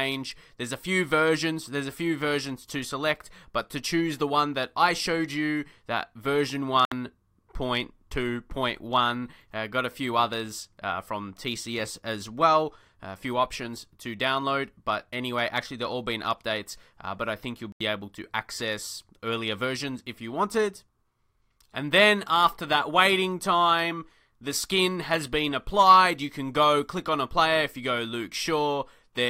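Packets likely held up by radio interference let the headphone buffer run dry, a Bluetooth stall: the audio cuts to silence for 66 ms at 6.85 s and 83 ms at 17.72 s.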